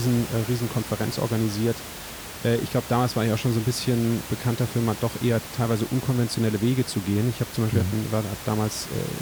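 Nothing stood out on listening to the speech, with only the room's own background noise sitting about 13 dB beneath it.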